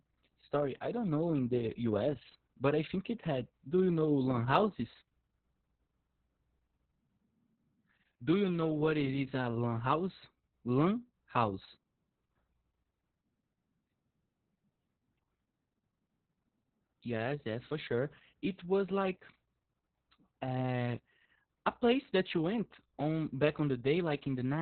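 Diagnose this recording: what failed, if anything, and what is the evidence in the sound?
The failure is at the codec stage: Opus voice compression, heavy throughout. The speech sounds muffled, hoarse and slightly robotic. Nothing survives above 4 kHz. This points to the SILK coder running narrowband at around 6 kbps, with long frames and coarsely coded excitation.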